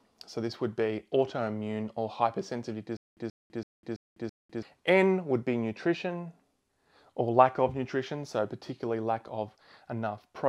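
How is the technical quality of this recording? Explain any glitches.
One glitch stands out, a stutter with silent gaps from 2.97 to 4.63 s. A 130 ms burst of sound repeats five times, each followed by about 200 ms of dead silence, every 331 ms. It's likely a stalled stream replaying its last fragment on each retry, so the intended audio is lost.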